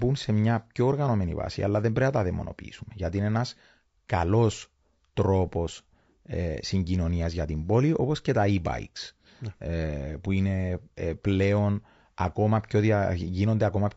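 It's a speech clip with plainly audible, grainy roughness throughout and noise filling between the harmonics, most likely low-delay AAC compression at a rate that fits roughly 32 kbps.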